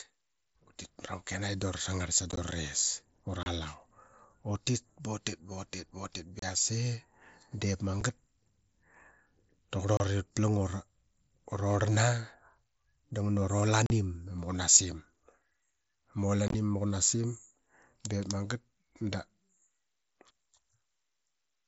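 Unconcealed Bluetooth headset packet loss: voice packets between headset and phone went missing and nothing filled them, so the speech drops into short holes with abrupt edges. The gaps fall at 2.31 s, after "da vra sangarl sa", with 30 ms lost across 60 ms, and at 3.43, 6.39, 8.01, 9.97 (before "ut plang"), 13.86 (between "da ngana ura" and "ama qunasim") and 16.48 s, where 45 ms goes across 60 ms. Each loss runs 7.5 to 45 ms and sounds like a brief chop in otherwise continuous mSBC wideband speech, which carries its own light codec grain.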